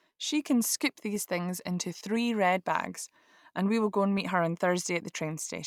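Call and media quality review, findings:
Clock drift buffer slips: regular clicks in the speech, about one per second (1.01 s period) from 0.16 to 5.19 s. Likely independent device clocks about 150 ppm apart, dropping or repeating a few samples each time. Strict periodicity rules out random packet loss.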